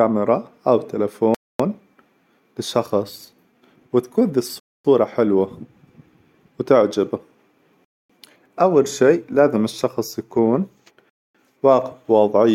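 A gap between chunks cuts in at 1.35, 4.6, 7.85 and 11.1 s. The speech arrives in 3-second chunks with 250 ms of silence at each join: after "للشخص وتكون", before "أول شيء لازم الشخص" and after "شيء لازم الشخص يكون". Each hard-edged hole shows as a flat waveform line and a blank vertical spectrogram band.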